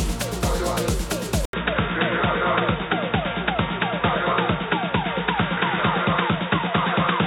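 At 1.45 s, after a silence of 80 ms, the audio turns boxy and narrow. The input has likely switched to a poorer device. From there to the end the spectrogram shows nothing above 3.8 kHz, with a new, faint noise floor.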